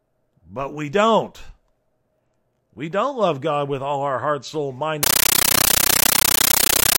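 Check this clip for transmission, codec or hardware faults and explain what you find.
One fault appears: from 5.03 s to the end at 6.98 s the speech gives way to a compressed stream played as audio. An AC-3 (Dolby Digital) bitstream reached the output undecoded and was treated as plain samples. Each frame becomes a 13.3 ms burst of noise-like data followed by zero padding, repeating 31.25 times a second, which fits a 640 kbps stream. It sounds like harsh, very loud chattering static. A waveform shows dense blocks separated by flat gaps; a spectrogram shows broadband vertical stripes.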